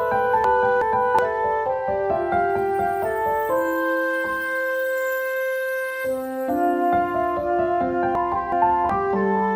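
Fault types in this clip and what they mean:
Frames out of order: two neighbouring runs of frames got swapped before decoding. At 0.44–1.19 s and 8.15–8.90 s, each 0.74 s stretch plays with its two 0.37 s halves traded, giving a garbled flutter, but no time is lost.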